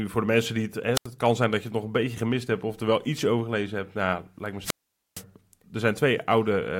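Speech that twice surges into a brief burst of hiss and then drops into near silence: a short hole from 0.94 to 1.07 s, muted for about 81 ms, and a longer one from 4.62 to 5.23 s, muted for about 463 ms, before the voice returns. These are wireless microphone squelch dropouts. The analogue FM radio link fades, noise rises as the signal weakens, and the receiver's squelch gate shuts the output until reception recovers.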